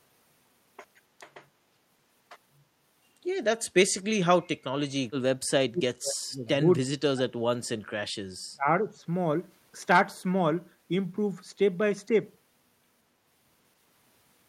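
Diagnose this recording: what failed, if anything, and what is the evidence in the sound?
Call processing failed: speech suppressed in double talk. The speech sinks sharply at 3.6–3.75 s, by about 25 dB, then again across 4.19–6.61 s and 6.79–8.97 s, where it falls by as much as about 40 dB in broken stretches. On a waveform the envelope collapses in ragged gaps. A spectrogram shows energy thinning to faint traces. The likely cause is an echo canceller unable to separate near-end talk from the loudspeaker echo during overlap, and attenuating both.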